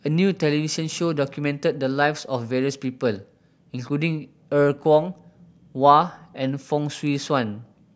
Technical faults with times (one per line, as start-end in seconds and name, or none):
none